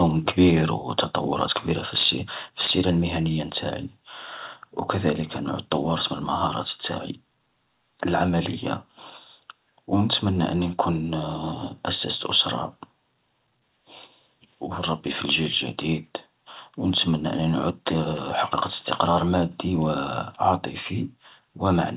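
Microphone overload first appears from 1.96 to 2.1 s, right after "كبير وتطورات كبيرة في", and again from 2.62 to 2.73 s before "المهنية نتاعي". The peaks are flattened at the converter's ceiling, most likely from an input gain set too high, about 5 to 6 dB over full scale. Unlike codec grit, the crackle rides only on the loudest syllables.

At 2.67 s, inside that second burst, a microphone volume step down of about 2 dB drops voice and background together at once. It is a single level shift with no distortion of its own, likely the call software cutting the input gain after the clipping.

Shorter, milder overload returns at 18.72 to 18.74 s and 21.68 to 21.70 s, only about 1 to 2 dB over.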